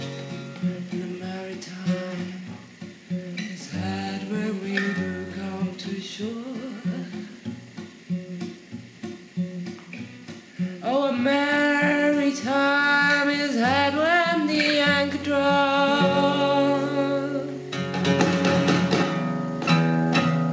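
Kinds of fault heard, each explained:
No faults are audible; the sound has passed through a call path whose codec leaves nothing above 8 kHz, which fits a wideband codec such as G.722.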